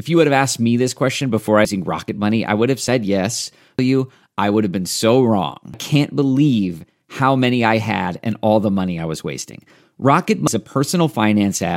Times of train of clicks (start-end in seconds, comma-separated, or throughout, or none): none